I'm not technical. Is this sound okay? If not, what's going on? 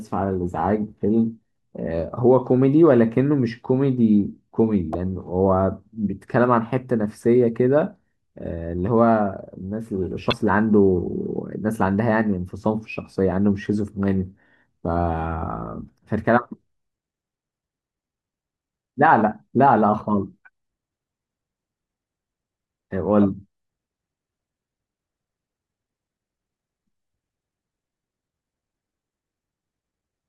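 No. The speech has two brief glitches, from 4.91 to 4.96 s and from 10.29 to 10.33 s, each about a twentieth of a second. These come from damaged data in a compressed stream: part of the file is wrong, so the player misreads that stretch and briefly loses its place. At each of those moments you hear a short chirp, squawk, click or gap in the speech.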